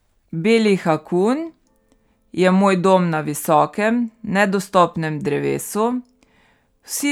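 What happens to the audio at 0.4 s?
Nothing goes wrong at 0.4 s: the speech carries on intact there, with no dropout, click, distortion or glitch at that moment.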